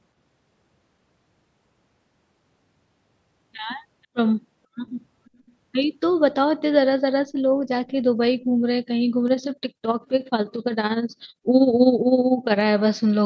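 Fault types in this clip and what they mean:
Echo leak: a very faint delayed copy of the speech, roughly 35 dB below it and trailing by 482 ms, surfaces briefly from 5.25 to 5.53 s, likely from a loudspeaker path the echo canceller failed to clear; unlike reverb, it repeats rather than smearing.
Overlap-add ripple: from 9.28 to 12.66 s the level pulses by about 11 dB at roughly 15 Hz, a rough tremolo from frames rejoined with overlap windows that do not sum evenly; unlike dropouts, it is a steady periodic flutter without gaps.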